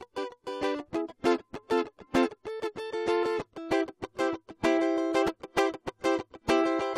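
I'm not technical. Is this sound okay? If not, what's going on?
Yes, this music clip sounds fine. There's nothing going wrong in it that needs explaining.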